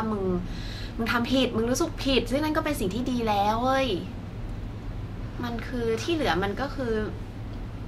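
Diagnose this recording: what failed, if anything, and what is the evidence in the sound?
Nothing stood out on listening; no stage of the recording or playback chain gave any audible sign of failure.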